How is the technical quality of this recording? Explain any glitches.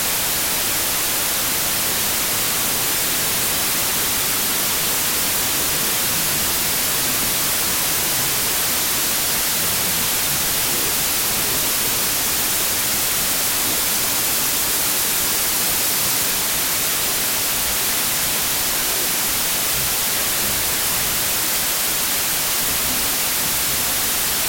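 Poor, because the whole recording is affected by a wrong sample width. The data were stored as 32-bit integers but are being read as 16-bit, so each true sample splits into two values. One carries the signal's top bits and the other holds low-order bytes that behave like noise. The speech sits buried under loud hiss and grit, playing at half speed and an octave low. A plain sample-rate mismatch would also slow and lower the speech, but it would stay clean rather than drowned in noise.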